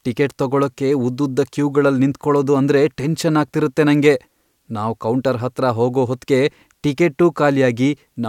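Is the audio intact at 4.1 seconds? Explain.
Yes, at 4.1 seconds the speech plays through cleanly with no dropout, click, distortion or other fault.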